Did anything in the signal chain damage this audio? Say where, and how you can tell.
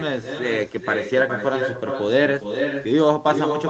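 Yes. An echo with no canceller runs through the whole speech clip: a thinner copy trails about 400 ms behind, only about 7 dB down, looped back from the far-end loudspeaker.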